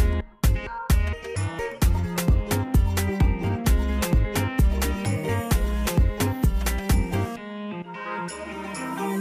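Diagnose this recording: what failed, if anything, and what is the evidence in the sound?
Nothing failed: no stage in the chain, from analogue wiring through conversion, buffering and playback, leaves any audible fault in this recording.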